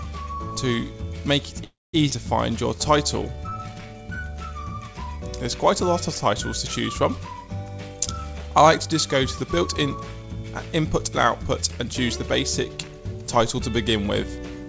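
At 1.64 s the audio stops advancing and is filled for about 0.3 s, until 1.95 s. The last sound trails on as a fading buzz or hiss that drops to silence for roughly 210 ms before playback resumes exactly where it left off, with nothing lost. This is a call audio freeze, likely caused by packets stalling in transit so that the jitter buffer ran dry and the receiver had to improvise concealment until they arrived.

Just after, between 2.09 and 2.12 s, comes a skip ahead. Around 150 ms of audio is simply gone, and the material on either side of the cut is butted together with only a few milliseconds of blending, so the sound lurches forward abruptly. Here queued audio was discarded, either lost in transit or dropped when the buffer overflowed. It also takes back much of the delay the freeze had just added.

From 3.23 to 3.99 s a jitter buffer slow-down stretches the audio to 85% speed while pitch holds steady. 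The receiver, building up reserve in a thinning buffer, duplicated individual pitch periods and slivers of pauses over and over, inserting 127 ms in total. Sustained sounds are drawn out.

Near the end, from 12.77 to 13.37 s, a jitter buffer speed-up runs the audio at 112% without changing pitch. The buffer had accumulated more than its target, so the receiver trimmed short runs of pitch periods in succession, removing something like 70 ms. The passage sounds hurried. Throughout, content stops at 8 kHz, which fits a G.722 call codec at 64 kbps.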